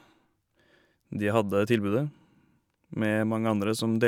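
Speech, with no technical faults to report. Nothing in the recording points to a problem with how the sound was captured, processed or passed along.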